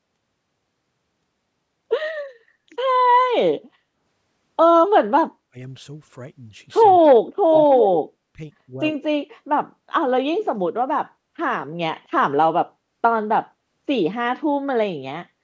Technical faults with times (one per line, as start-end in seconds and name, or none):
5.49-5.57 speech suppressed in double talk
7.01-7.07 speech suppressed in double talk
7.67-8.38 speech suppressed in double talk
7.72-7.82 echo leak
8.66-9.22 speech suppressed in double talk